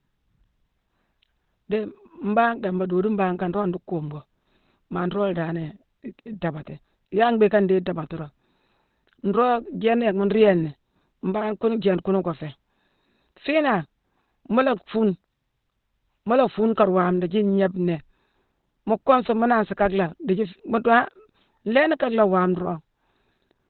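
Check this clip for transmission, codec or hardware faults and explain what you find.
One codec fault runs through the whole recording: Opus compression, most likely at a very low rate. Heavy low-bitrate coding pushed the encoder into its narrowband speech mode, which models the voice rather than keeping every band, so nothing survives above about 4.3 kHz, which fits a rate around 12 kbps. The speech therefore sounds muffled and boxed-in, with a hoarse roughness and dulled sibilants from start to finish.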